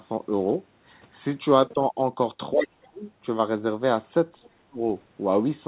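From 2.52 to 3.05 s the talker gets pushed right down, by as much as about 35 dB at the deepest point, for around half a second. That's most likely speech suppressed in double talk: with both ends talking, the echo canceller couldn't tell the near speech from the loudspeaker echo, so it ducked everything. Inside that dip, from 2.63 to 2.67 s, there's a faint scrap of the other side's voice leaking through, roughly 15 dB under the talker. It's likely residual echo from the far end's loudspeaker that the canceller didn't fully strip from the mic. The same ducking comes back from 4.41 to 4.82 s, again sinking deep for about 0.4 s. Throughout, nothing gets above 4 kHz, which fits a narrowband G.711 call path.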